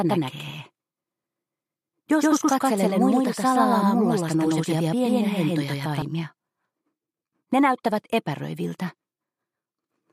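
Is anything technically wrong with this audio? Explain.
Yes. From the start until 6.02 s there is a doubled audio track. A second capture path likely lags the first, so an equally loud copy trails about 150 ms behind, dry and abruptly stopping.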